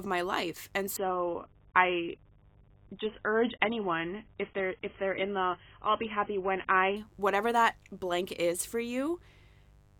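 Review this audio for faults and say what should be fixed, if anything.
A mains buzz runs through the whole recording. It is a steady, raspy tone built on 50 Hz, sitting roughly 35 dB below the speech. The rasp comes from sharp switching spikes, twice per mains cycle, leaking in from a dimmer, a rectifier or an unshielded cable. Those spikes add harmonics of 50 Hz that climb well up the spectrum. To prevent it, keep dimmers and power supplies away from the signal path and use shielded, balanced cabling.

An adaptive stream at a lower bitrate takes over from 0.97 s to 6.97 s. The change is abrupt in both directions, with no gap. During that stretch nothing is heard above 3.8 kHz, so the speech turns dull. Codec artefacts also rise. This fits a switch from roughly 96 kbit/s AAC down to roughly 16 kbit/s after the connection slowed. To prevent it, capture from a stable connection or a local recording rather than a live adaptive stream.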